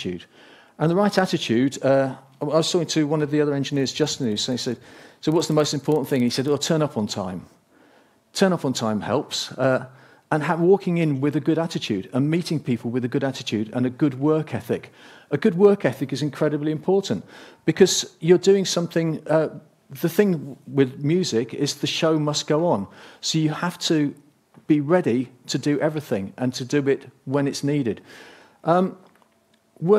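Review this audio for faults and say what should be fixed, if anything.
From 3.64 to 6.81 s there is a buzz at 25 Hz that rises and falls with the level. This is a filter restarted on every block. Its state resets, so each block opens with a small transient. The 25 Hz rate points to blocks of about 40 ms. To prevent it, keep the filter's state between blocks instead of clearing it.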